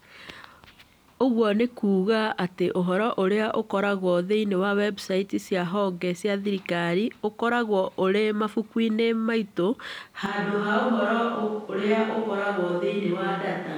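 Speech clip. At 10.26 s the sound turns suddenly roomy and hollow, with thinner bass, and stays that way to the end. This is likely a switch to a distant microphone. The level barely changes, and room noise sits about 35 dB below the speech.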